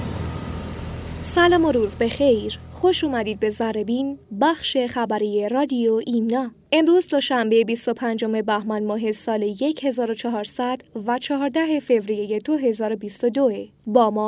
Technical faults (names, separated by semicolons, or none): none